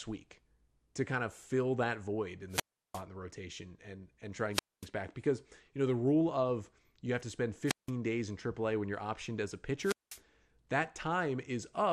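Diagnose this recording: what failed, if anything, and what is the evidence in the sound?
Throughout, the speech sounds dull and lacks top end, with a gurgling, granular edge on the voice and upper detail that seems to flicker in and out. That is the codec stage, most likely MP2 compression running at a low rate; the damage fits something around 80 kbps. Layer II divides the spectrum into 32 sub-bands and shares out bits. With so few bits available, the upper bands keep switching off and the remaining ones are quantised coarsely.

There are four wireless microphone squelch dropouts, at 2.49–3.03 s, 4.52–4.87 s, 7.66–7.91 s and 9.80–10.20 s. In each, the hiss swells, the audio falls into a hole of near silence, and then the speech comes back. The muted stretches last about 350 ms, 240 ms, 170 ms and 195 ms. This fault belongs to the analogue radio link. The FM signal from the microphone fades far enough that the receiver's squelch shuts its output until the carrier recovers.

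At 6.28–6.33 s there is a short burst of DAB burbling, lasting about 50 ms on top of the speech. It comes from the broadcast reception stage. A small rate of bit errors slipped past error correction into a handful of MP2 frames. The corrupted samples put short blips of noise into single sub-bands, and corrupted scale factors, where they got through, made sub-bands jump in level for up to a frame.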